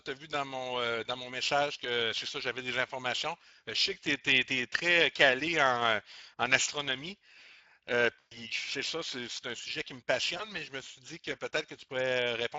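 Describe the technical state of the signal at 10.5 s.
At 10.5 s the signal sits inside a stretch of VoIP packet loss concealed by the speech codec, running from 10.37 to 10.52 s. A gap of about 20 ms, which points to a single lost frame, was filled by the decoder repeating its last pitch and filter with falling gain. The result is a brief buzzy tone or coloured noise that fades and recovers slowly. On a spectrogram, harmonics freeze into flat horizontal bands that fade. The waveform shows a repetitive, decaying envelope.

Underneath this, Speex codec damage is plainly audible throughout. The character points to a mid-rate setting around 20 kbps, where the CELP excitation is coarsely coded. The sound comes out hoarse and grainy. A spectrogram shows smeared, noisy harmonics and fuzzy texture in the upper band where finer detail should be. In the waveform, the periodic structure looks roughened by quantisation noise.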